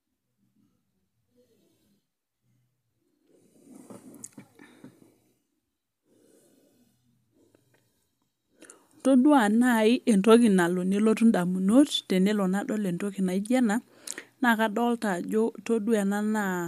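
No technical faults can be heard anywhere in the recording.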